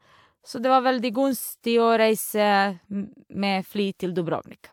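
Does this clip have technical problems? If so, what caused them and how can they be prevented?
No, nothing stood out as a technical problem on listening to this speech recording.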